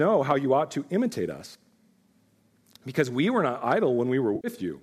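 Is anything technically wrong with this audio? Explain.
Yes. Two brief bursts of hard clipping and one patch of AAC frame loss with concealment are audible in this speech.

Hard clipping occurs at 0.31 s, just before "you ought to imitate", and at 3.72 s, just after "we were not". Each lasts only a few milliseconds. The peaks push about 2 dB and about 3 dB past what the stage can pass, so the waveform tops are sliced flat. Those flat tops add high harmonics that sound like a sharp crackle on the loud syllable. Unlike codec roughness, which spreads evenly, this bites only on peaks.

The AAC frame loss with concealment runs from 4.36 to 4.48 s, a gap of about 80 ms. That length points to roughly eight short frames of about 10 ms, which fits the low-delay AAC compression likely carrying this audio, and that compression leaves only light graininess elsewhere. The decoder rebuilt the missing stretch from the last good spectrum, so it sounds smeared and phasey rather than cleanly silent. 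A plain dropout would instead leave a hard hole with clicks at its edges.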